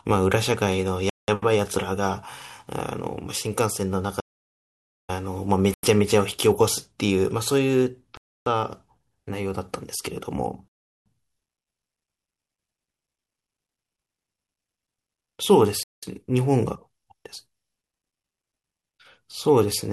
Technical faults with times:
1.09-1.28 Bluetooth stall
4.21-5.09 audio dropout to silence
5.74-5.84 Bluetooth stall
8.17-8.46 Bluetooth stall
10.68-11.06 Bluetooth stall
15.83-16.03 Bluetooth stall

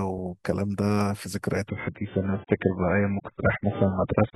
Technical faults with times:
1.68-4.35 adaptive stream at a lower bitrate

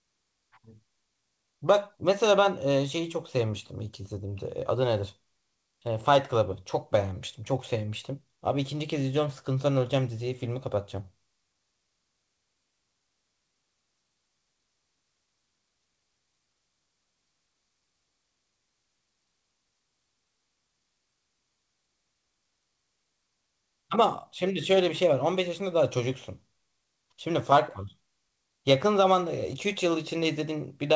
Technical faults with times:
none

